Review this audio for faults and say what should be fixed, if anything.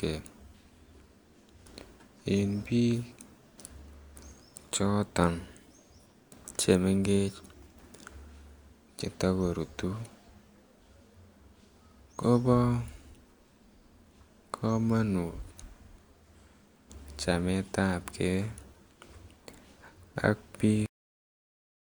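The final buffers were never written out, a cut-off end: the speech stops mid-sound at 20.86 s and drops straight to digital silence, with no decay. Flush and finalize all pending buffers before closing the stream or file.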